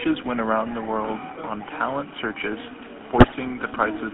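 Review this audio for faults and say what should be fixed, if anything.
The speech carries the GSM full-rate codec throughout. Its band runs only from about 200 Hz to 3.5 kHz. The codec models the vocal tract and drives it with a sparse, regularly spaced pulse train. That leaves a buzzy, gravelly roughness on every voiced sound. The damage is plainly audible. The sound fits a 13 kbps full-rate stream. To prevent it, capture or route the audio over a wideband path instead of a GSM call.

GSM bit errors strike from 3.18 to 3.35 s, right after "world on talent searches". Over that span the audio breaks into squawks, pops and gargling. Corrupted filter, pitch and gain values reach the decoder. Each hit frame gets a bent spectrum or a sudden level jump. The roughly 0.17 s burst fits about eight damaged 20 ms frames, which suggests an error rate of a few percent. To prevent it, record on a strong, stable link or use a connection with error protection.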